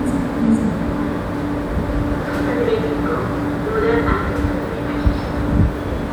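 No technical faults are audible anywhere in the recording.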